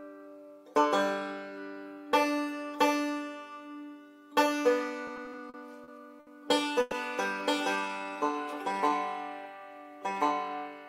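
Repeated stalls (stutter) run from 5.07 to 6.29 s: seven short gaps, the longest 70 ms, where packets arrived late and the jitter buffer kept emptying. The receiver stretched the last sound to fill about 190 ms, roughly a sixth of that stretch, so nothing is lost but the audio catches and drags. A call audio freeze follows at 6.81 to 6.94 s, where the sound briefly holds as a continued buzz or hiss for 110 ms without dropping to silence, then resumes where it stopped. It was likely caused by packets being held up in transit, adding 110 ms of delay. A jitter buffer slow-down runs from 7.76 to 8.90 s. To rebuild its reserve, the receiver repeated single pitch periods and fragments of pauses, adding 139 ms, so the audio plays at about 89% speed at unchanged pitch, with drawn-out sounds.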